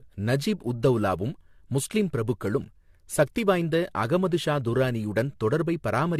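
Throughout, the speech has most likely been through repeated lossy encoding, around five passes of AAC at a rate that fits 64 kbit/s, causing generation loss. Nothing remains above 14.3 kHz, and the voice sounds swirly, hollow and smeared, with consonant attacks blurred.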